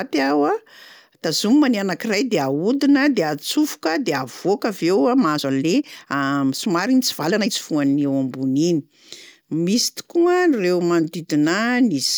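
From 5.15 to 7.53 s the speech runs 1.45 times faster with unchanged pitch: a time-stretched section, likely squeezed by software dropping short pieces. It sounds rushed. A spectrogram shows compressed syllables under steady harmonic spacing, and the waveform shows small splice jumps.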